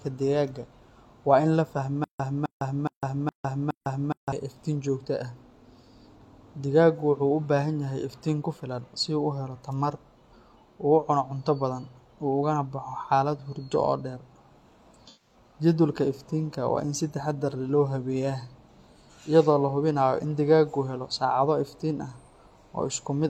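From 2.04 s to 4.32 s, just after "in la", there is a stutter with silent gaps. A fragment of about 261 ms plays, then about 155 ms of dead silence follows. The pattern returns every 416 ms, five times over. The likely cause is a stalled player or stream that replayed its last buffered piece at each retry and then ran dry. The speech that should have filled this span never plays.

From 15.07 s to 15.34 s comes AAC frame loss with concealment. About 128 ms of coded audio went missing, which points to a few lost frames in a row. The decoder covered the hole by reusing the last good spectrum. The patch sounds smeared and noisy, with a phasey edge, instead of dropping straight to silence. Clean speech then resumes.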